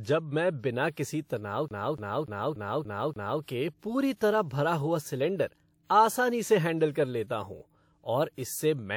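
From 1.68 s to 3.43 s the speech hits a CD stuck on one turn fault. The player keeps jumping back over the same 290 ms section, which plays six times, each jump marked by a brief mute, giving the fast, regular stutter of a skipping disc.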